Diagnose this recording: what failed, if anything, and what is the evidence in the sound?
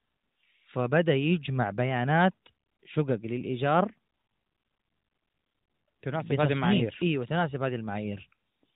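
Nothing failed in this recording.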